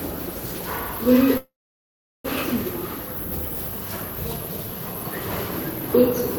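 A call audio freeze runs from 1.37 to 2.27 s. The last sound smears into a fading buzz, then about 0.74 s of silence, before the audio resumes where it stopped, nothing lost but delayed by 0.87 s, likely from packets stalling and the jitter buffer running dry.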